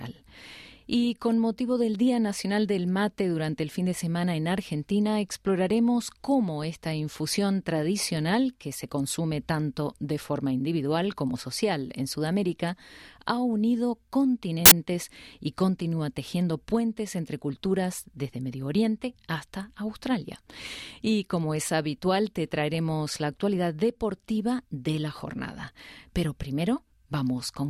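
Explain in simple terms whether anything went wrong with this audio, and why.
Something did go wrong. From 14.66 to 14.72 s there is a sudden blast of loud, hissing static about 60 milliseconds long, starting and stopping with hard edges. This is a case of file tags played as audio: the player read part of the embedded cover picture as if it were sound. Because picture data is compressed, it comes out as very loud white noise rather than a click or a gap of silence, which sets it apart from an ordinary dropout.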